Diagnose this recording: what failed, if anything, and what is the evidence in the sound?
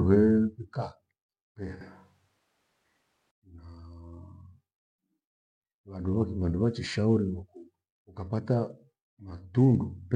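From 1.81 s to 3.31 s the speech turns suddenly roomy and hollow. The bass thins out, and the level falls by about 5 dB. Background noise rises to roughly 25 dB below the speech. At 3.31 s the close, full sound returns just as abruptly. This is a switch to a distant microphone at the capture stage. The close microphone's feed most likely dropped out, and a farther pickup that hears more of the room filled the gap.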